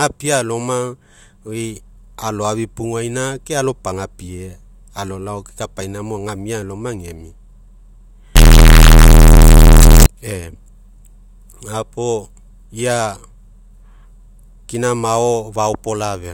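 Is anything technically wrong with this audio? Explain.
Yes. From 8.36 to 10.06 s the speech turns into a blaring, near-square buzz at an almost fixed, high level, with background noise as loud as the speech. The likely cause is float read as integer, 32-bit float samples decoded as 32-bit integers, so sign and exponent bits dictate level. Unlike ordinary clipping, the level no longer follows the speech's loudness, yet pitch stays traceable.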